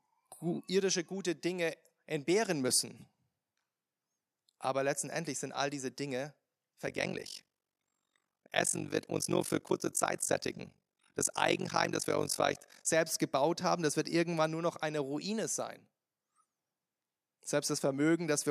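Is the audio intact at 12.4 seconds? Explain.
No. At 12.4 s the speech is inside an overlap-add ripple (6.87 to 12.87 s). Mismatched frame overlaps swing the level by about 60 dB, roughly fifty times a second, giving a robotic flutter. This shows as comb-like envelope dips in the waveform and regular vertical striping on the spectrogram.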